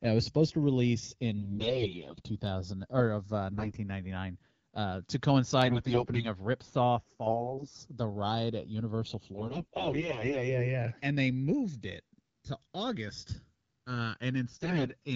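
A speech recording carried over an AMR wideband (HD Voice) link, with its top band stopping near 7 kHz. It has two faults. The left and right channels are drifting apart throughout. The two sides run on clocks that disagree by something like 70 ppm, so the gap between them slowly grows to under a millisecond. Summed to mono, this gives a gradual flanging sweep. On a spectrogram it shows as comb notches gliding steadily through the spectrum. AMR bit errors turn the speech hoarse, scratchy and gargly at 1.38–2.22 s, 3.51–3.78 s, 5.64–6.26 s, 7.26–7.80 s, 9.35–10.59 s and 14.51–14.91 s. The less protected bits in the frames arrived corrupted, so the excitation pulses and the fine pitch and spectral details decode wrongly. On a spectrogram these stretches show smeared, noisy harmonics.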